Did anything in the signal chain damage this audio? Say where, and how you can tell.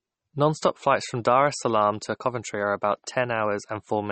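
Yes. The damage is at the codec stage and runs through the whole speech clip. Nothing is present above 8.4 kHz, a hard treble ceiling rather than a gradual roll-off. Codec damage is plainly audible from start to finish. The likely cause is MP3 compression at a low bitrate, which fits about 32 kbps. With so few bits, the encoder drops weak frequency lines frame by frame and cuts the top end at a fixed frequency.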